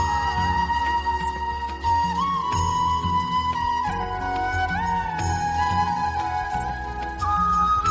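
Nothing in this audio points to a technical fault.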